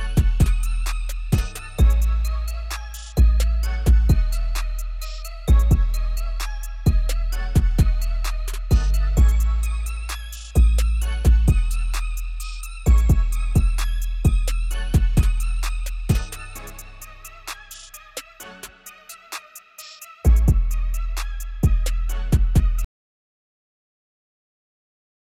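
At 22.85 s the audio cuts out abruptly and stays in total silence through to the end, about 2.5 s later. This is an audio dropout to silence. The input was most likely lost and the recorder kept writing silence. What marks it out from a quiet passage or a fade is that there is no decay and no lingering room tone or noise floor. The signal simply stops dead mid-flow, and whatever followed is missing.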